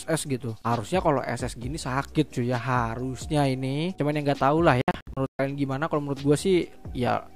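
At 4.82 s there's a digital broadcast dropout running to 5.40 s. The receiver muted on bad frames, punching short holes totalling 320 ms, the longest 128 ms, before sound resumed.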